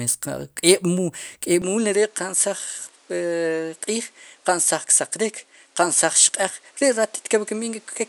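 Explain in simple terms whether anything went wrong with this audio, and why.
Input switched to a poorer device at 1.62 s: the speech suddenly turns duller until the end, losing everything above 11.4 kHz, likely because recording moved to a lesser microphone.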